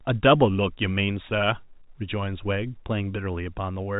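Nothing in this speech clip stood out as a technical fault on listening.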